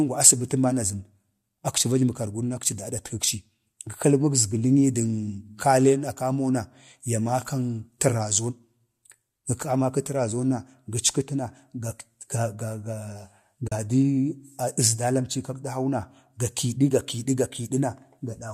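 At 13.68 to 13.72 s the speech fades briefly into a soft-edged gap of about 40 ms, the sound of AAC frame loss with muting. The decoder zeroed the missing spectrum, a gap that fits roughly four short frames of the likely low-delay AAC compression.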